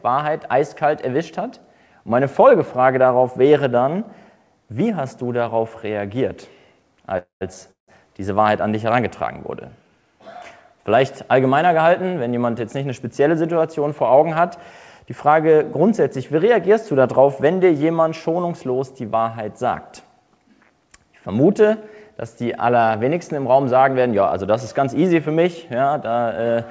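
At 7.18 s and again at 7.71 s there's a call audio freeze. Each time the last bit of sound gets stretched into a fading buzz and then goes quiet for about 130 ms, for roughly 0.25 s and 0.19 s in total. The likely cause is delayed packets draining the jitter buffer. The audio then picks up exactly where it stopped, so nothing's lost but the timing shifts later.

From 24.42 s to 25.35 s there's a jitter buffer speed-up. The receiver trims out short pitch-period slices to shed excess delay, around 70 ms in all, so the sound runs about 6% fast at unchanged pitch and feels a touch hurried. Throughout, the G.722 call path leaves nothing above 8 kHz.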